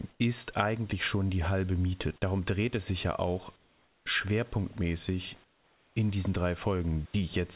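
In three pauses the room background gives way to a smoother, quieter hiss: 0.12 to 0.20 s before "ist eigentlich schon die" (about 2 dB down), 3.56 to 4.06 s after "es sich ja auch" (about 7 dB), and 5.44 to 5.96 s before "in diesen drei" (about 8 dB). This is likely comfort noise in place of the background, generated while transmission paused.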